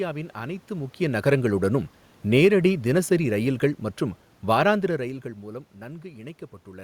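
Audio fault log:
1.0–3.83 s, automatic gain falling: the speech sinks steadily by about 4 dB, with the room noise behind it dropping by the same amount. The gain control judged the input too loud or its background noise too strong and eased its gain down over nearly three seconds.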